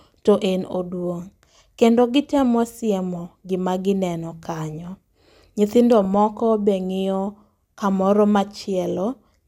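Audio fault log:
6.05–6.15 s, DAB burbling: a short patch of burbling sits over the speech just before "moko be", lasting about 0.1 s. Weak reception has let bit errors, at a rate of roughly a fifth of a percent, slip through error correction into the MP2 data, so corrupted samples put short blips of noise in single sub-bands and corrupted scale factors make sub-bands jump in level for up to a frame. Seven frames were damaged.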